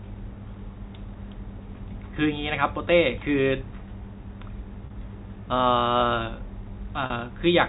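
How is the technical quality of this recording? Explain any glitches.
Two short dropouts mar the speech, at 4.86 s and 7.06 s, each about 40 ms long. The audio travels through G.711 telephone coding, which is why nothing reaches above 4 kHz.

Packet loss with pitch repetition: At both points a stretch of data never arrived, which fits two 20 ms packets lost in a row. The receiver filled each gap by replaying the last pitch period of the voice and fading it down. Because each gap is this brief, the concealment barely decays, so the voice briefly sounds held and buzzy before normal speech blends back in.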